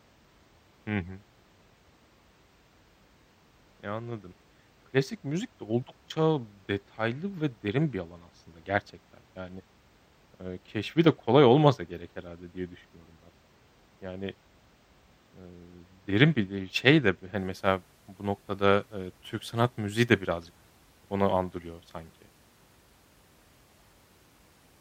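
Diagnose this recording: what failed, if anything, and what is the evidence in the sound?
Channel delay (comb filtering) at the converter or driver stage, from 0 to 17.37 s, ending before "mesela bu noktada eee". The speech sounds dull at the top. One channel lags about two samples, roughly 0.05 ms, before a mono sum. This cancels highs, with a first notch near 10 kHz.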